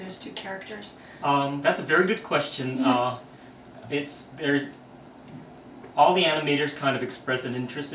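Nothing stood out as a technical fault on listening to the clip.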